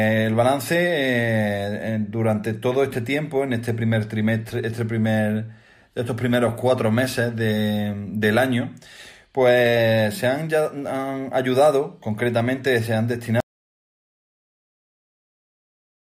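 At 13.40 s the sound cuts off abruptly. An audio dropout to silence follows and runs to the end, about 2.7 s. The gap is silent, with no room tone. The input was likely lost while recording continued writing silence.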